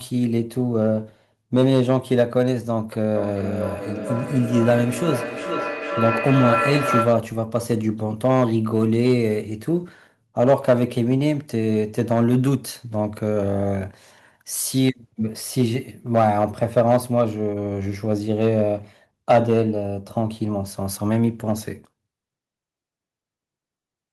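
Speech runs with hard clipping throughout. The signal is driven about 6 dB past what one stage can pass, so the loudest peaks, only a small fraction of samples, are sheared flat and crackle with high harmonics. Unlike a limiter's smooth squeeze, the damage is abrupt and confined to peaks. From 3.15 to 7.32 s there is feedback echo between two devices: each stretch of speech returns at a steady interval of roughly 400 ms, thinner and more ringing than the original, and peaking about 3 dB below the direct speech. A second device in the room plays this call back into a microphone whose echo canceller cannot remove it. The fixed spacing sets it apart from room reverberation or a single acoustic echo.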